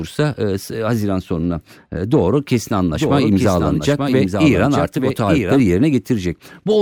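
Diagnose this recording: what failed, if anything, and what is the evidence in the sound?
A doubled audio track appears at 2.94 s, right after "sonuna e doğru kesin", and runs to 5.6 s. A full-band second copy trails the original by roughly a second, a few decibels quieter, and switches on and off abruptly. This is likely a second, slower capture path or an editing error at the driver or storage stage. Unlike acoustic echo or reverb, the copy has no decay, no room colouring and no band-limiting.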